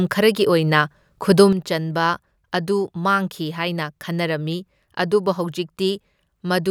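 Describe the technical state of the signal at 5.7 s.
At 5.7 s the speech sits inside a one channel drops out fault that begins abruptly at 1.53 s and runs to the end of the clip. The level stepped down by about 6 dB at that point and stays there, which is most likely one side of a stereo feed going silent before the mono sum halves the shared content. Unlike a fade or a gain change, the drop is instant, and anything present only in the missing channel is gone rather than quieter.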